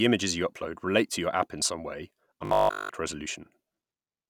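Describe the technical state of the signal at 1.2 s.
At 1.2 s the speech signal is intact, with no dropout, click, distortion or other fault at that point.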